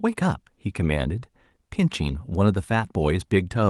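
No technical faults are audible.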